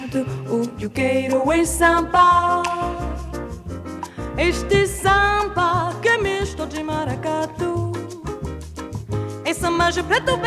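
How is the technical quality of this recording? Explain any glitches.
Nothing in this recording trips me up; there aren't any glitches to explain, so you can relax on that front.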